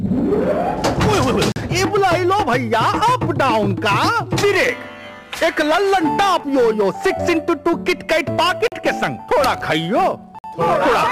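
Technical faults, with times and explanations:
1.52 to 1.56 s, 8.68 to 8.72 s and 10.39 to 10.44 s, block of digital silence: the sound drops straight to silence for about 40 ms, 40 ms and 54 ms with no fade, so each one is heard as a short hole. That fits output buffers not being filled in time.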